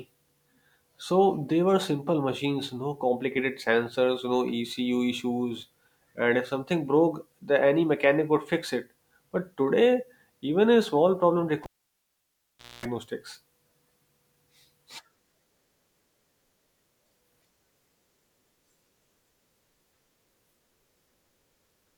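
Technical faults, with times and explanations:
11.64–12.85 s, cable pulled and plugged in: after "even a small problem" a pop drops the speech to near silence for 1.17 s. A 0.23 s burst of 60 Hz mains buzz follows while only the plug tip makes contact, then a second pop as full connection returns.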